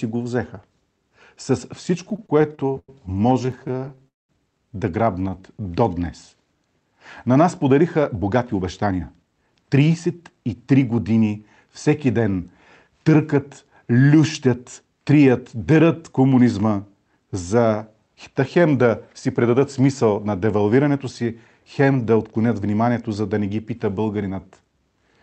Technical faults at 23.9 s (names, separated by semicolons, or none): none